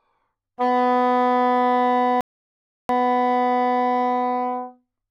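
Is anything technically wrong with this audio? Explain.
Yes, there is one fault. A rebuffering stall occurs from 2.21 to 2.89 s: playback ran dry of downloaded audio and paused until more data arrived. The sound drops to silence for 684 ms, then picks up exactly where it stopped. Nothing is missing, but the pause lengthens the clip.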